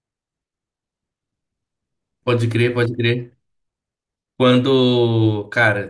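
No technical faults are audible in this speech recording.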